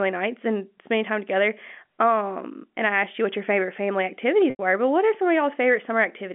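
Packet loss with pitch repetition hits this speech clip from 4.5 to 4.59 s. About 90 ms went missing, which fits three lost 30 ms packets. The receiver repeated the last pitch period, giving a brief buzzy hold that fades before speech cross-fades back in, within G.711 telephone coding's 200 Hz to 3.4 kHz band.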